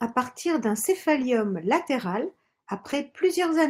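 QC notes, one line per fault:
1.17–1.23 s (just after "partir d'un") and 2.87–2.93 s, lost packet rebuilt from error correction: no dropout, but each stretch of about 40 ms turns rougher and noisier. Those lost packets were filled from the low-bitrate backup copies carried in the next packets.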